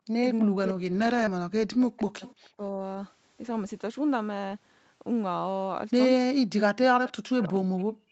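The speech dips hard from 0.00 to 0.22 s and again from 0.43 to 2.25 s. Level falls by roughly 40 dB, and parts cut out. This is speech suppressed in double talk. The echo canceller likely mistook two sides talking at once for echo and turned everything down. A milder dip of about 10 dB follows from 2.56 to 2.79 s. A deep cut returns at 6.25 s and lasts to the end.

Within the second dip, 0.57 to 1.23 s holds a lost packet rebuilt from error correction. About 340 ms came from low-bitrate backup copies in later packets. There is no gap. Those stretches sound rougher and noisier.

At 1.25 to 1.29 s there is short concealed packet loss. About 20 ms never arrived. The decoder stretched the previous sound for 14 ms to cover it, then blended back. It sounds like a brief smear.

From 2.26 to 2.49 s, and briefly at 7.07 to 7.11 s, a faint copy of the speech trails 313 ms behind. It sits about 25 dB below the main speech. 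This is echo leak, likely from a loudspeaker whose echo canceller left some residue.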